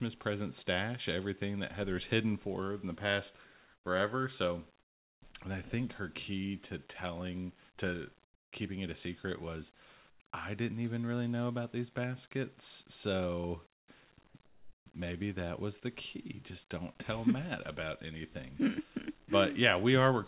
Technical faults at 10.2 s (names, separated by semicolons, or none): comfort noise in place of the background